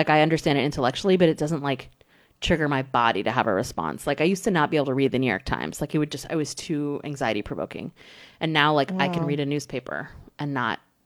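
Nothing in the speech stood out as a technical problem on listening.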